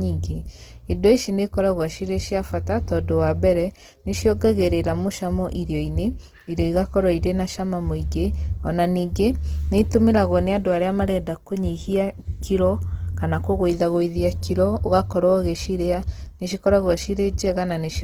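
Opus compression damage is plainly audible throughout the speech. Starved bands are noise-filled, so the sound turns rough and grainy, likely from a rate near 16 kbps.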